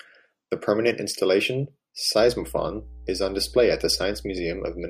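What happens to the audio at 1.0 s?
Nothing goes wrong at 1.0 s; the speech plays through that moment intact, with no dropout, click or distortion.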